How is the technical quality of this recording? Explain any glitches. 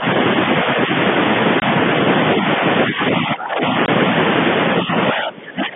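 The recording has two kinds of glitch: repeated dips in the talker's level that point to an echo canceller at work, and two short dropouts from lost packets. Underneath, the narrow telephone band of G.711 coding comes through cleanly.

Speech suppressed in double talk happens at 0.00–0.06 s, 0.64–0.91 s, 2.87–3.63 s and from 4.83 s to the end. The voice sinks by roughly 10 dB, then about 5 dB, then about 20 dB twice. Most likely the far side spoke at the same moments, and the echo canceller treated the talker as echo and turned it down. On a waveform the envelope visibly shrinks.

Packet loss filled with silence appears at 1.60–1.62 s and 3.86–3.88 s. Each hole lasts 20 ms, which fits one missing packet. The receiver played nothing in its place, so the sound stops abruptly. A waveform shows a flat, near-silent stretch with sharp cut ends. A spectrogram shows a thin blank vertical stripe.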